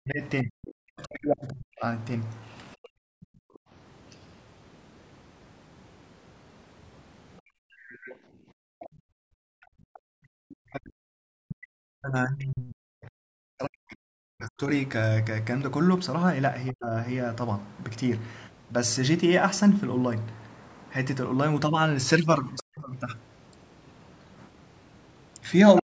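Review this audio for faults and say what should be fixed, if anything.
Speech suppressed in double talk at 0.0–3.21 s, 10.43–16.93 s and 22.61 s to the end: the talker dips deeply, around 40 dB, likely from an echo canceller ducking both sides. This differs from gating because the voice drops, not just the room.

The other side's voice leaking through at 3.23–3.59 s, 7.72–9.98 s, 22.6 s and 25.8 s comes in faint scraps and one longer stretch, roughly 30 to 20 dB below the talker, rising to near-equal loudness at the end. A likely uncancelled loudspeaker residue adds a second voice, unlike suppression, which removes one.

Background gated by the echo canceller at 3.49–3.7 s and 7.41–10.15 s: room tone drops by about 40 dB while the loudspeaker plays, then returns.

Prevent all three by using a headset or better-tuned echo cancellation with double-talk detection, so loudspeaker sound doesn't end up in the recording.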